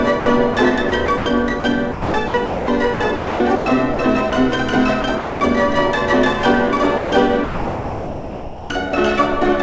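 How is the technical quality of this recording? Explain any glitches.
The recording has one recurring glitch: sound chopped by the voice detector, heard three times. From 0.20 to 4.32 s, 5.02 to 5.40 s and 6.98 to 8.70 s the audio turns choppy. Roughly 1.2 s, 0.24 s and 1.4 s of it respectively are replaced by a smooth synthetic hiss. This is likely the sender's voice activity detection repeatedly switching transmission off and on, with the receiver filling the gaps with comfort noise. Across the clip nothing is heard above 8 kHz, which fits a wideband call codec such as G.722 at 64 kbps.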